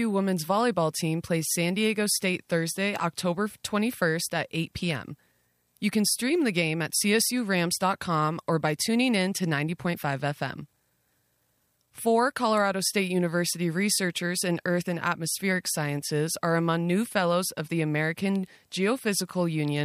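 Nothing in the speech stood out as a technical fault on listening.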